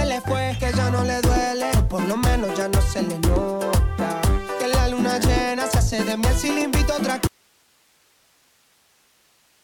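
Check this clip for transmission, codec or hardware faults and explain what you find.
One fault is present. Audio dropout to a faint residue, from 7.27 s to the end: the signal likely broke off while the path stayed live, so it cuts abruptly to hiss roughly 40 dB down.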